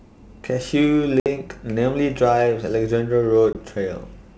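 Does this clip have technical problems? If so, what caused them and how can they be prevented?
Yes. Packet loss on an ADPCM call filled lost packets with silence and knocked the decoder's adaptive predictor and step size out of step with the sender's. That leaves hard-edged holes at 1.20 to 1.27 s (60 ms, several packets) and 3.53 to 3.57 s (20 ms, a couple of packets), after which the speech returns slightly distorted before settling. A jitter buffer, packet loss concealment that keeps the decoder state in step, and a more reliable network path would prevent it.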